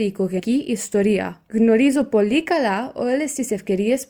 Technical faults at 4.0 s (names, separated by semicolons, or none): none